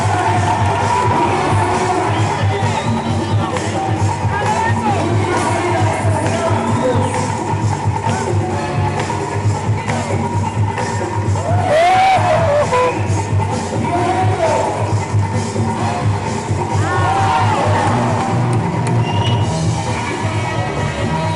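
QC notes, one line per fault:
16.43–16.58 s DAB burbling: short blips of noise where bit errors of around a tenth of a percent slip past correction into the MP2 data, putting wrong samples into single sub-bands. The span fits about six frames. A spectrogram shows isolated rectangular flashes in narrow bands.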